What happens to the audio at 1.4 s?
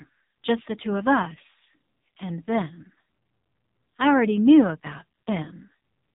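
At 1.4 s the speech is passing through an AMR narrowband mobile codec, as it does for the whole clip. Its heavy damage points to a low-bitrate mode near 6 kbps, leaving the voice buzzy and synthetic with nothing above about 3.8 kHz.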